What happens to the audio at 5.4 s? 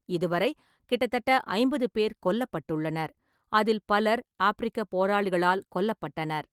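Nothing goes wrong at 5.4 s: the speech there comes through intact, with the Opus voice compression working as normal.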